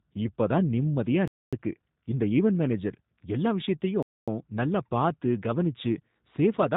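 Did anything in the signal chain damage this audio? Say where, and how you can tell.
Yes. At the codec stage, speech was squeezed through G.729, which fits an 8 kbit/s stream: nothing above 3.8 kHz survives, and the voice sounds rough and synthetic throughout.

At playback, audio arrived in 2.5 s chunks with a gap between chunks: hard-edged 250 ms silences at 1.28–1.53 s and 4.03–4.28 s interrupt the speech without losing any.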